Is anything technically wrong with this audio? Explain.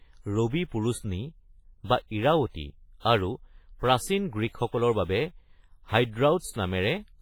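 Yes. WMA compression, throughout the speech: the sound is likely encoded with Windows Media Audio, which fits a low bitrate near 24 kbps. Long transform blocks smear heavy quantisation noise over tens of milliseconds and drop weak components, giving a ringing, washy tone with hiss pumping alongside the voice.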